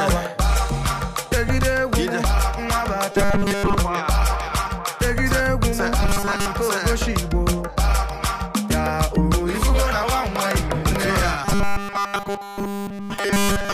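From 3.12 to 3.78 s, 6.02 to 6.47 s, and 11.45 s to the end, the sound becomes a rigid, metallic buzz fixed at 200 Hz: robotic sound from repeated short buffers. This is likely the playback reusing a 5 ms block when fresh audio arrives late, skipping most of the real signal, and all of it in the final stretch. Unlike stutter, which repeats audible chunks, the buzz holds a steady pitch while loosely tracking the underlying sound.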